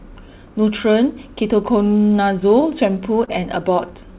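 Scattered short gaps run from 2.4 to 3.29 s of the speech: about five small packet losses, the longest around 30 ms, which the receiver patches by extending the preceding sound, giving brief ticks and smeared hiccups over roughly 70 ms in all, across a band-limited G.711-style path that stops at 4 kHz.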